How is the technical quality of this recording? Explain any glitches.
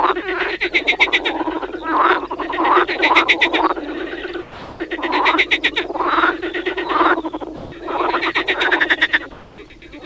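The recording has three short glitches, all points where the background or the sound gets swapped for synthetic noise. It also passed through a call path, and nothing reaches above 8 kHz, which fits a wideband G.722 link.

Comfort noise in place of the background, at 4.42 to 4.80 s and again at 9.32 to 9.58 s: during pauses the real background, sitting about 21 and about 25 dB below the loud parts, flattens into steady, featureless hiss, about 3 and about 2 dB quieter. That's likely discontinuous transmission, with the receiver filling the gap.

Sound dropped by the voice detector, at 7.56 to 7.72 s: about 80 ms of actual sound vanishes into that same flat noise for 160 ms. The sender's detector likely mistook the sound for background and stopped sending until it triggered again.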